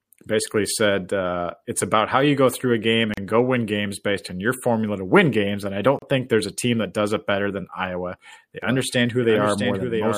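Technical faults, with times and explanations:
3.14–3.17 s and 5.99–6.02 s, gap at a join of encoded pieces: the speech stops dead for 37 ms after "go through a game", then resumes with "and go win games", and again for 33 ms just before "think there's a team". Each gap is the encoder's start-up delay and final-frame padding left in where two pieces were joined. Unlike a network dropout, the edges are smeared and the speech picks up exactly where it stopped, with nothing lost.
8.62 s to the end, doubled audio track: a second full-band copy of the speech enters abruptly and runs to the end, about 0.7 s behind the original and roughly 5 dB quieter. The likely cause is the same audio being captured again through a slower path, or an edit that stacked two unaligned copies. It differs from an echo or reverb in having no decay and no room colour. It is a clean, fixed-offset duplicate that switches on suddenly.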